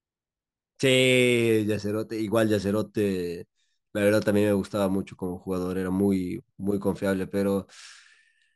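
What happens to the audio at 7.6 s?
At 7.6 s the speech carries imaging from sample-and-hold upsampling, present through the whole clip. Each sample was repeated to go from 22 kHz to 44.1 kHz. A mirrored copy fills about 11 to 22 kHz, roughly 25 dB down, and is heard as a bright metallic fizz.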